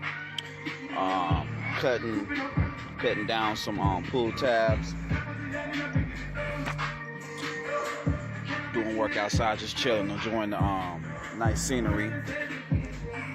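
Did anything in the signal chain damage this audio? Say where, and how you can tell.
Yes. AAC frame loss with concealment at 5.60 to 5.66 s, in the codec stage: a 43 ms patch turns smeared and phasey, which fits a single lost AAC frame that the decoder filled by reusing the previous spectrum with scrambled phase rather than true content.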